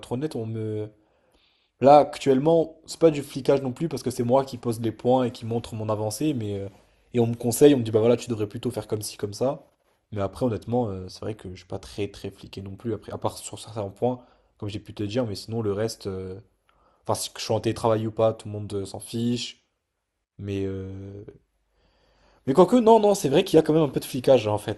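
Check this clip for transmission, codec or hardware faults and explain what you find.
One fault runs through the whole clip: MP2 compression. The speech was likely coded with MPEG Layer II at a low rate, which fits 80 kbps. Starved upper sub-bands flicker off and the rest are coarsely quantised, so it sounds plainly dull, gurgling and granular.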